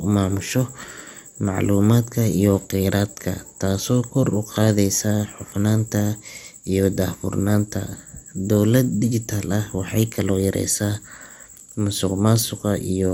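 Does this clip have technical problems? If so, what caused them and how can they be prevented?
Yes. Throughout the speech there is a dull, gurgling, granular roughness, and nothing is present above 16.6 kHz. This is likely MP2 compression. MPEG Layer II divides the signal into 32 sub-bands and shares out a fixed bit budget, so the top bands are dropped and the remaining ones are quantised coarsely enough to make the grain plainly audible. The damage fits a rate around 80 kbps. To prevent it, encode at a higher bitrate or use a more efficient codec.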